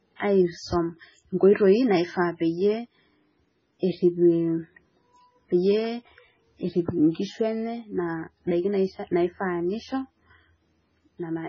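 Throughout, the speech has nothing above 7.5 kHz and sounds watery and swirly: heavy damage, likely MP3 compression starved of bits, fitting roughly 16 kbps.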